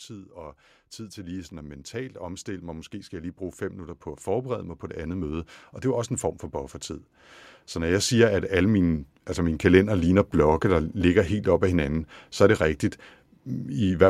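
From about 0.08 s to 6.82 s you get automatic gain rising. The AGC decided the input was too quiet and slowly pushed its gain up by about 12 dB, so the speech and the room noise behind it swell together. It happens again from 7.73 s to 10.19 s, a smaller climb of about 6 dB that settles just before "blokke der ligger helt."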